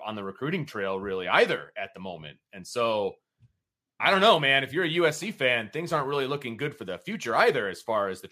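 Nothing to flag: no technical faults turn up anywhere in the speech.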